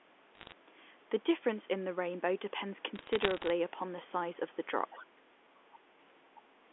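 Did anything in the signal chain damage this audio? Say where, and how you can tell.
Yes. Bit errors on a digital phone line struck the digital telephone link. Sharp ticks and crackle sit over unchanged speech from 0.35 to 0.52 s and from 2.96 to 3.50 s. Flipped bits in the A-law samples corrupt single samples. The rate sounds under one percent.

The other side's voice leaking through shows up as brief fragments of a second voice. They occur at 4.91 to 5.02 s, 5.72 to 5.79 s and 6.35 to 6.42 s. They sit about 20 to 25 dB below the talker. The likely cause is loudspeaker echo that the call's echo canceller left in.

Speech suppressed in double talk follows at 5.01 to 5.27 s. The talker's level dips by as much as about 20 dB just as the first leaked fragment ends. This is likely the echo canceller pulling down the whole signal because it cannot separate the two voices.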